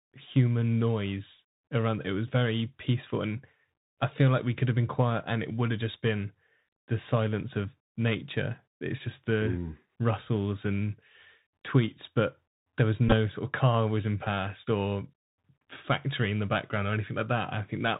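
Throughout the clip, the speech passes through a Bluetooth CVSD headset codec, consistent with a 64 kbit/s stream. Nothing above 4 kHz survives, s sounds turn scratchy, and a granular hiss sits underneath.

From 13.08 to 13.14 s, between "tweets but there was" and "sort of car whizzing", Bluetooth headset packets are repeated: about 26 ms lost across 38 ms, with stale packets replayed as a short 267 Hz buzz.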